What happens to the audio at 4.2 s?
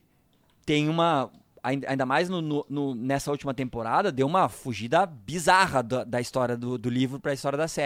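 Nothing goes wrong at 4.2 s; the speech carries on intact through that moment, with no dropout, click or distortion.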